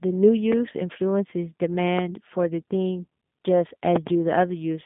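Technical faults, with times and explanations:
Throughout, G.729 codec: the speech is confined to a telephone band of roughly 150 Hz to 3.6 kHz, with nothing at all above 3.7 kHz, and it carries a plainly audible rough, slightly synthetic texture. The codec keeps only a vocal tract filter, a pitch predictor and a few excitation pulses per short frame, which fits an 8 kbit/s G.729A-type codec. That rebuilt, buzzy grain sets it apart from simple band-limiting, which would dull the speech without roughening it.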